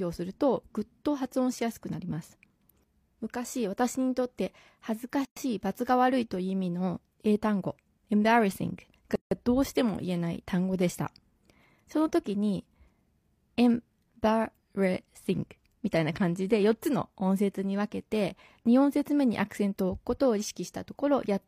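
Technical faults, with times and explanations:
5.25–5.37 s and 9.16–9.31 s, gap at a join of encoded pieces: the speech breaks off in gaps of 116 ms and then 158 ms. Separately encoded segments were joined untrimmed, so encoder start delay and final-frame padding remain. The codec smears the edges, so the silent part is shorter than the gap, and the speech resumes where it stopped.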